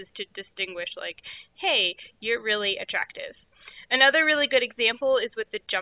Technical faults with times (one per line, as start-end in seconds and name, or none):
none